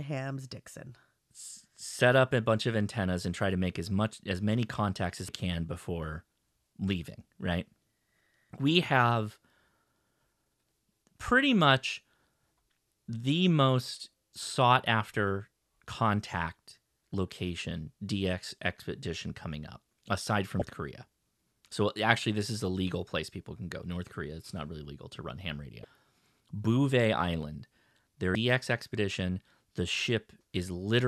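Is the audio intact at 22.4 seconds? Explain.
Yes, the audio is intact at 22.4 seconds, with no fault present at that moment.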